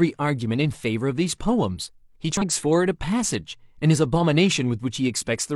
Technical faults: damaged data in a compressed stream

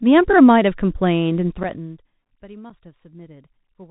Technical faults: Bluetooth CVSD headset codec; unconcealed Bluetooth headset packet loss

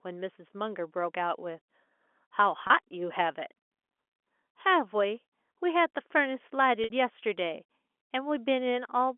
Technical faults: packet loss with pitch repetition

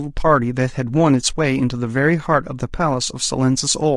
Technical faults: low-delay AAC compression; AAC frame loss with muting

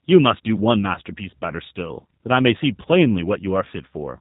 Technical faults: G.729 codec

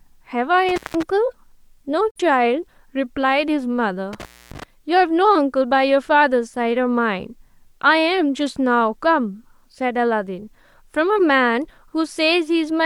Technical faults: intermittent contact; digital broadcast dropout

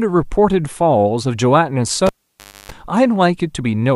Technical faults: cable pulled and plugged in

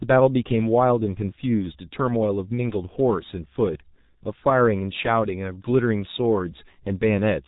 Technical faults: G.723.1 codec

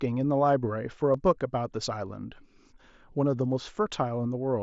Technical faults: concealed Bluetooth headset packet loss

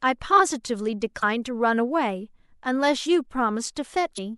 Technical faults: damaged data in a compressed stream

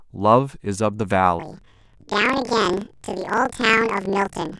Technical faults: planar audio read as interleaved

